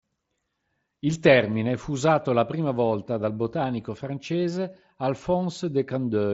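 No faults detected; the speech rides a Bluetooth mSBC headset link at 61 kbps, and its light grain on loud passages is normal for that path.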